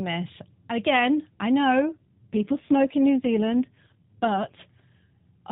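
Right after "again I", from 1.82 s to 4.63 s, the speech turns rougher, buzzier and more synthetic, then recovers. This is an AMR rate drop: the mobile codec switched to a lower mode, spending fewer bits on the voice. The degradation fits a step down from 12.2 to about 5.9 kbps. On a spectrogram the 4 kHz ceiling stays put and the waveform shows no gap, but harmonics blur and fine spectral detail thins out across that stretch.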